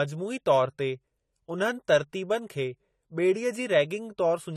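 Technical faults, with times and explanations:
Throughout, AAC compression: the speech likely passed through an AAC-LC encoder starved of bits, which fits a bitrate near 32 kbps. Nothing remains above 14.1 kHz, and coarsely quantised bands leave the sound dull and smeared, with plainly audible fizzy, warbling sibilants.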